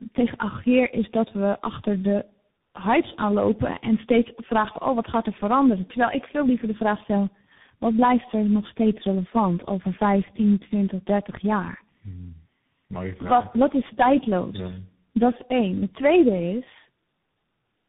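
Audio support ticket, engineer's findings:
Rough, muffled, warbly speech for the full clip; nothing above 3.8 kHz. Tandem speech coding: the sound fits a path crossing three speech coders, likely AMR-NB, G.723.1, then CVSD, joined by G.711 hops. Decoded and recoded at each border, so each coder inherits the previous one's damage.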